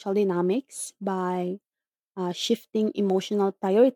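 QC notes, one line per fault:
No technical faults can be heard anywhere in the speech signal, so there is nothing to log.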